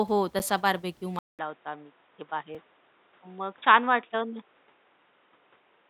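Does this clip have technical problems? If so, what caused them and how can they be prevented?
Yes. Two blocks of digital silence, at 0.39 s (8 ms) and 2.55 s (about 2.7 ms, which fits a 128-sample buffer), likely mean the output buffer went unfilled, each heard as a tick or dip. Larger buffers or a lighter real-time processing load prevent this.

From 1.19 s, after a 200 ms silence, the sound turns dull, with nothing above 3.8 kHz and a new noise floor roughly 40 dB below the signal, at much the same level as before. The likely cause is the input switching to a poorer device. Locking the recording input to one device and disabling automatic switching prevents this.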